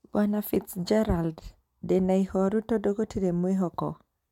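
Nothing technically wrong stands out in this short bit of speech, so there's no fault to point to at any moment.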